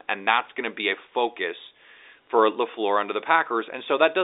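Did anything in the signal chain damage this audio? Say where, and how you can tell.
No, nothing in the signal chain damaged this audio.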